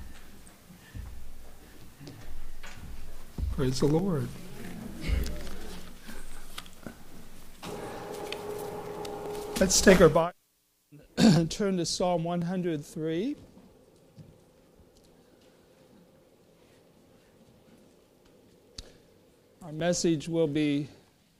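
From about 0.83 s to 20.86 s there's a regular click or pop roughly every 1.05 s, about twenty in all, heard wherever there's signal underneath. That steady rhythm points to clock drift buffer slips, most likely two devices on separate clocks disagreeing by something like a thousand parts per million, so the buffer between them creeps until a block of a few dozen samples gets dropped or repeated, and each slip leaves that tick.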